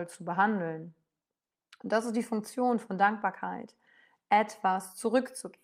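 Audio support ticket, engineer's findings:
No faults found in this speech recording. No dropouts, clipping, glitches or other defects turned up on listening.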